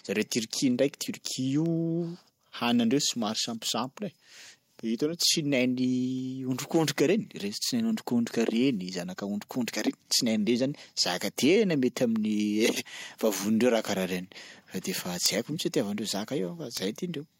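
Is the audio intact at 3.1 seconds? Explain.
No, 3.1 s falls within word clock ticks running from 0.15 to 16.77 s: an unlocked receiver clock drifts, slipping one sample about every one and a half seconds, heard as sharp ticks.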